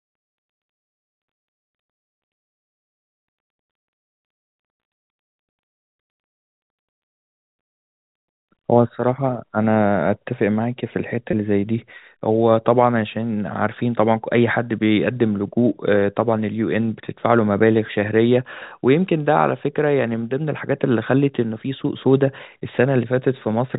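Packet loss with pitch repetition occurs at 11.31 to 11.33 s, where about 20 ms of speech goes missing, which fits a pair of 10 ms packets dropping out together. The receiver bridges the hole by replaying the most recent pitch period. Because the gap is so brief, the repetition doesn't get to fade out. It comes across as a momentary held, slightly buzzy note before the speech resumes, all within the 4 kHz band of the G.711 telephone coding.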